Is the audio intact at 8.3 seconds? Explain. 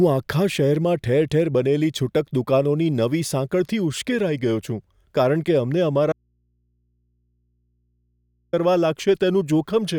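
No. An audio dropout to a faint residue runs from 6.12 to 8.53 s, cutting the speech abruptly for about 2.4 s. The likely cause is a lost signal feed into a path that stayed live, so the gap holds only mains hum, roughly 45 dB below the speech.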